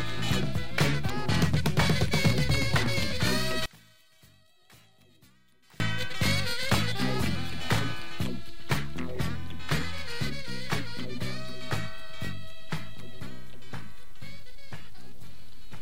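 From 3.66 to 5.80 s the level falls about 32 dB, likely one channel inverted cancelling in mono; the waveform shrinks and spectrogram fades.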